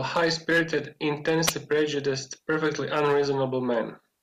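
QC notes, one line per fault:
1.46–1.52 s, wireless microphone squelch dropout. A short burst of hiss rises, the output mutes to near silence, and the speech returns on "prejudiced perfectly". The radio signal faded for about 70 ms, so the receiver's squelch cut the audio.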